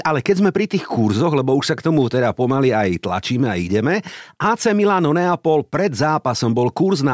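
Speech recording, no audible technical faults.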